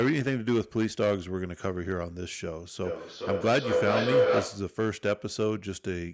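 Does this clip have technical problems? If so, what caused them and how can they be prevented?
Yes. There is hard clipping throughout this speech clip. The signal reaches a stage about 10 dB hotter than it can pass. The loudest peaks are cut flat, a few percent of the audio in all. Those flat tops add harmonics high in the spectrum. The result is a harsh crackle and fuzz on louder syllables. The call's microphone processing still keeps nothing above 8 kHz. To prevent it, lower the input gain until peaks sit below full scale.

A feedback howl runs from 2.84 to 4.78 s. Two devices in the same room are on the call. Sound goes from a loudspeaker back into a microphone, gaining level each trip. The repeats narrow to a tone near 500 Hz. It pulses roughly every 0.4 s, the loop's delay. At its loudest it is about 4 dB above the speech. To prevent it, mute one device or use headphones whenever two devices share a room.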